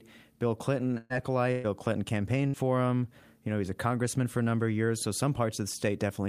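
Three short smears break the speech, at 0.97 to 1.13 s, 1.52 to 1.67 s and 2.48 to 2.57 s, where the last sound is held and fades before jumping ahead. Each is a burst of packet loss. The receiver filled about 120 ms, 120 ms and 60 ms by stretching the last audio it had and dimming it, and when playback resumed, roughly that much of the speech was simply gone.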